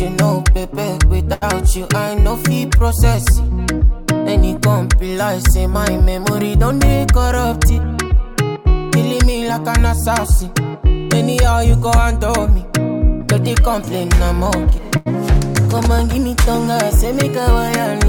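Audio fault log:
1.33–1.44 s: short stall from a late packet. A packet arrived late and the jitter buffer ran dry, so the last sound was stretched by 82 ms, then resumed with nothing lost.
7.14–8.05 s: jitter buffer speed-up. Excess buffered audio was trimmed by cutting short pitch-period slices repeatedly, removing about 70 ms, so sound runs at 106% speed without a pitch change.
14.97–15.08 s: short stall from a late packet. The buffer emptied again while waiting, so the receiver held the last sound for 90 ms before continuing from the same point.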